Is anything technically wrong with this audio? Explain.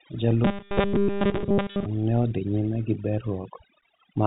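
Yes, there are two faults in this speech clip.

Throughout, there is overdone noise removal. A noise reducer set too aggressively pulls individual frequency bands down whenever they sit near its noise estimate, taking quiet parts of the voice with them. The background drops and breaks up into twinkling specks. That points to the noise reducer, not the telephone-band G.711 coding.

From 0.45 to 1.86 s, ending just before "ne odhi nyime gi", there is robotic sound from repeated short buffers. All of this stretch becomes a rigid, metallic 200 Hz buzz that loosely follows the speech. The likely cause is audio arriving too seldom, with the software looping about 5 ms of the last buffer and skipping the real audio. Its fixed pitch sets it apart from the noise reducer's twinkling.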